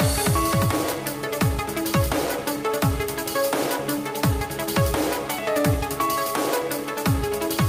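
No technical faults are audible anywhere in the recording.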